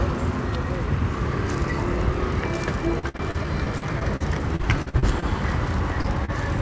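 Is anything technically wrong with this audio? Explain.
Yes. There are two kinds of packet loss, heard through a call path with nothing above 8 kHz, which fits a wideband codec such as G.722.

From 2.99 to 5.30 s there is repeated packet loss, giving a robotic sound. Audio keeps dropping out in short holes, the longest about 50 ms. Each hole is patched by extending the previous sound. About a fifth of this stretch is patched, so it turns choppy, with pieces missing.

Near the end there are two short concealed packet losses, at 6.01 to 6.07 s and 6.25 to 6.31 s. Each time about 30 ms never arrived. The receiver bridged the hole by continuing the last sound, then blended back. Each one is heard as a brief smear or wobble.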